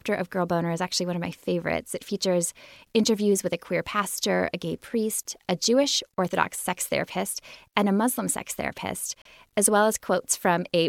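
A brief, fairly quiet squeak-like blip cuts in at 9.22 to 9.27 s, between "sex therapist" and "as well". It is a corrupt frame decoded: damaged bits in a few compressed frames were played anyway, misplacing energy across frequencies for that span.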